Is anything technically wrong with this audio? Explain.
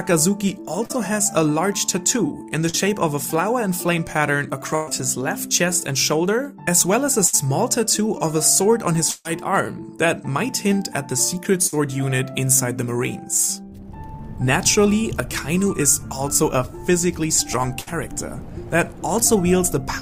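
Yes, there are two kinds of network dropout here.

There's short concealed packet loss at 0.85 to 0.91 s and 2.69 to 2.75 s. Each time about 40 ms never arrived, so the receiver patched it by extending the preceding sound, which comes across as a quick smear or wobble.

There's also burst packet loss, which is longer, at 4.75 to 4.89 s, 7.27 to 7.35 s, 9.11 to 9.27 s, 11.67 to 11.75 s and 17.81 to 17.89 s. Between 60 and 140 ms went missing each time, and concealment stretched the last sound and faded it into a held buzz or hiss before the audio resumed further on. The 11.67 s one also runs about 7 ms long.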